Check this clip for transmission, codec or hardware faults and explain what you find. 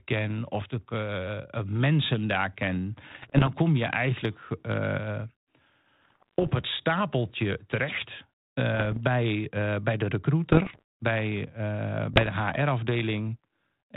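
Two kinds of fault are audible: chunks out of order at two brief moments, and bit errors on an ADPCM link in five short stretches of the speech.

Chunks out of order, at 0.60 to 0.62 s and 12.54 to 12.56 s. A 10 ms chunk plays one chunk late, so two neighbouring slices swap places. No audio is missing, but the reversed order leaves three hard joins, heard as a tiny jumbled moment.

Bit errors on an ADPCM link, at 3.10 to 3.50 s (after "mensen daar ken", before "kom je"), 6.02 to 6.52 s (before "het stapeltje terecht"), 8.74 to 8.98 s (after "het stapeltje terecht", before "bij bij de"), 10.50 to 10.82 s and 12.13 to 12.32 s. Flipped bits, at roughly one in a hundred or fewer, corrupt the decoder's step size and prediction. Each error therefore smears on for milliseconds as pops, rasping bursts and momentary level jumps. The link itself is 32 kbit/s G.726, whose band-limited, lightly noisy telephone sound underlies these bursts.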